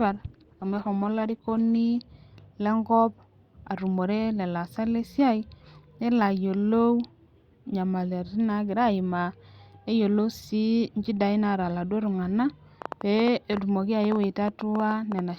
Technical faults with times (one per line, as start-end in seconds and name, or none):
0.00-2.00 adaptive stream starting at a low bitrate
12.82-15.20 train of clicks